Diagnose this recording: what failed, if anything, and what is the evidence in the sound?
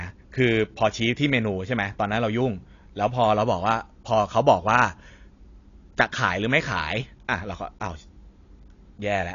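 The codec stage failed. Throughout the speech nothing survives above 7.2 kHz, and the damage is plainly audible as a dull, smeared sound. A spectrogram shows a flat ceiling at 7.2 kHz. This fits AAC compression at a low bitrate near 32 kbps, the likely cause.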